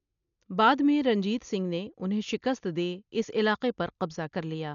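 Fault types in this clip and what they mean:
Dolby Digital compression: The speech has nothing above 7 kHz and sounds dull, with a rough, fluttering dither noise around voiced tones. This is likely a heavily starved AC-3 style encode, which fits a bitrate near 48 kbps, leaving many frequency lines without mantissa bits.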